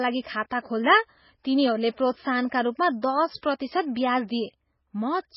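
A speech recording, heavily degraded by what is likely MP3 compression. Nothing survives above 5.6 kHz, so the treble is cut off sharply. The sound is watery and swirly, with smeared consonants, which fits a very low rate around 16 kbps. At 3.37 to 3.43 s there is pre-echo. A short hiss runs about 57 ms ahead of a sharp attack. The codec spread its noise across the whole block, so the attack itself sounds soft.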